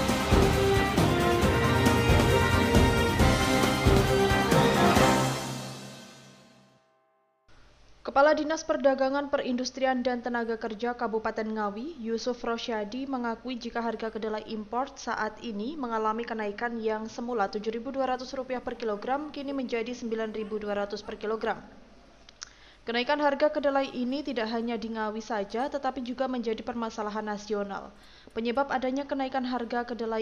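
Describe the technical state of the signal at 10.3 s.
At 10.3 s the signal is intact, with no dropout, clipping, distortion or other technical fault audible at that moment.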